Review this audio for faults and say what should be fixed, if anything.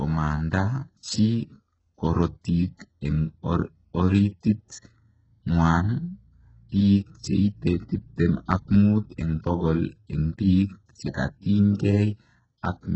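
Throughout the speech, sibilants sound gritty and metallic, with nothing above 8 kHz and heavy damage that points to roughly 8 kbps, likely HE-AAC compression. Its treble is copied upward from lower bands, so harmonics misalign; a plain low-pass would sound dull instead. Encode at a higher bitrate or use plain AAC.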